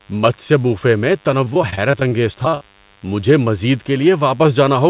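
Through the whole clip, a nearby DECT cordless phone or base station sends a radio burst every 10 ms that the audio circuit rectifies. This DECT cordless phone buzz is a thin, steady 100 Hz hum with many harmonics, sitting roughly 35 dB below the speech.

From 1.45 s to 3.02 s, repeated packet loss leaves a rapid string of short holes, the longest about 34 ms. Each is patched by stretching the preceding sound, covering about 260 ms in total, roughly a sixth of that stretch. The speech turns choppy and robotic, with fragments missing, heard within audio that stops at 4 kHz, which fits a 64 kbps G.711 A-law call path.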